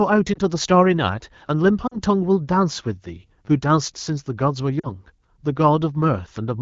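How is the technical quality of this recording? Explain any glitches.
The recording has two recurring glitch types over a light AMR wideband (HD Voice) codec coloration.

Lost AMR speech frames at 0.33–0.39 s, 1.87–1.97 s and 4.80–4.87 s: corrupted frames were concealed by reusing the last pitch and vocal tract settings at falling gain. The first gap, about 20 ms, gives a brief dip. The later two, about 40 ms each, drop to near silence.

Repeated buffer at 1.48 s and 3.45–3.47 s: audio arrived late, so the last 10 ms buffer replayed once, then twice. The result is a hard-edged click or short buzz.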